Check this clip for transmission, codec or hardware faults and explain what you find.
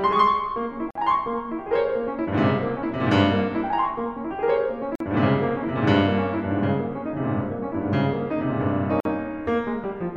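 The music has one kind of fault, repeated. A gap at a join of encoded pieces opens at 0.91–0.95 s, 4.95–5.00 s and 9.00–9.05 s, roughly every 4 s. Each gap lasts about 48–49 ms. The pieces were encoded separately and joined untrimmed, so encoder start delay and last-frame padding remain. The sound drops out abruptly, with smeared edges, then resumes where it stopped.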